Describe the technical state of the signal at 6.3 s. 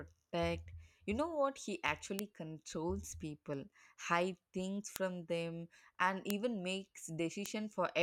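At 6.30 s there is a bit error spike: a single sample jumps to about -9 dBFS and straight back, as one flipped bit would cause. It sounds like one sharp tick, showing as a lone vertical line in the waveform and a thin full-band stripe on a spectrogram.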